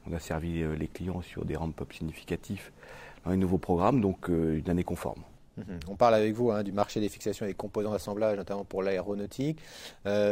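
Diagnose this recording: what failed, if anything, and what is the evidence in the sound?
Nothing failed; no stage leaves any audible trace.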